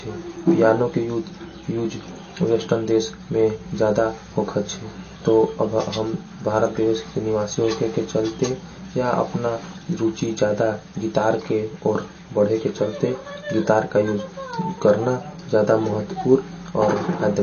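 Throughout the speech the sound is watery and swirly, s sounds chirp metallically, and nothing is heard above 6.6 kHz. This is likely MP3 compression at a low bitrate, which fits about 32 kbps: the encoder cut the treble and dropped weak frequency lines frame to frame.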